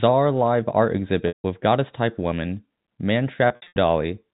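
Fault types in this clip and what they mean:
packet loss with pitch repetition: Packets went missing, and the receiver bridged each gap by repeating the last pitch period and fading it out. At 1.28 s a 160 ms gap holds buzzily, then sinks to silence. From 3.48 to 3.76 s, 180 ms of scattered losses cause stuttering holds.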